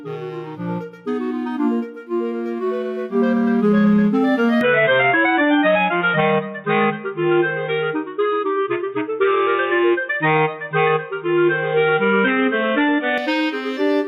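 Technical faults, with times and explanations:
Throughout: gain pumping. The gain is pulled down on each loud sound, with the level swinging by roughly 10 dB. The likely cause is input gain set far too high, with a fast limiter or compressor clamping down on each peak and releasing in the pauses. On a waveform the envelope looks flattened, with peaks held near one ceiling and the noise floor bulging between them. A spectrogram shows the background band brightening in gaps and fading under loud passages.
4.61–13.18 s: input switched to a poorer device. At 4.61 s the sound turns dull and boxy with no gap at the change, and at 13.18 s it opens up again. Nothing above 3.8 kHz survives in between, the level shifts by about 5 dB, and a new noise floor appears roughly 50 dB below the signal. This is likely the system moving to a narrower-band microphone or a headset call profile. On a spectrogram the upper band is cleanly cut off at 3.8 kHz for that span, and the waveform shows a step in level at each edge.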